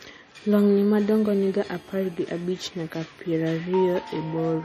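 Throughout, the speech sounds watery and swirly with smeared attacks and nothing above 15.2 kHz, likely MP3 compression at a low bitrate near 40 kbps rather than simple low-pass filtering. From 0.96 to 2.51 s, a GSM phone buzz sits about 31 dB below the speech: a steady, raspy 217 Hz tone rich in harmonics, harsher than smooth 50 or 60 Hz mains hum.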